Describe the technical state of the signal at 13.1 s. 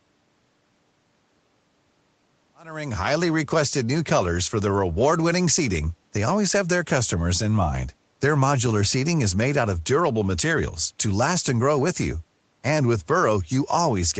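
At 13.1 s the signal is intact, with no fault present at that moment.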